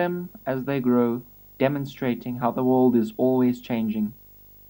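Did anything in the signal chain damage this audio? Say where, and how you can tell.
Yes. A video or display buzz runs under the speech for the whole clip, a low buzz at 50 Hz with a gritty hash above it and a very high whine at about 15.6 kHz. It sits well below the speech, roughly 25 dB down. The damage is in the analogue wiring: a screen or video cable is coupling into the audio path, so the picture's 50 Hz field rate and its line-scan rate leak in as interference before conversion.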